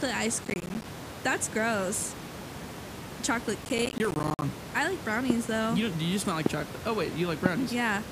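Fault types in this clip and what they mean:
Processor overload crackle: The processor can't finish each small audio buffer in time, and a string of deadlines gets missed in a row. Here each miss drops out as a tiny hole of silence with hard edges, so you get a gritty, tearing crackle over the speech from 0.44 to 0.85 s and again from 3.65 to 4.42 s. The grain of it suggests buffers around 10 ms, with about 20 skipped in the first burst and about 30 in the second.
Loud pop: A sudden voltage spike gets added to the signal, likely from something like a switch, static or a driver glitch, and the following circuitry shapes it into a sharp click. You hear three single pops at 5.30–5.32 s, 6.46–6.48 s and 7.46–7.48 s, each standing roughly 15 to 20 dB above the speech. The speech carries on underneath, along with the room noise sitting well below it.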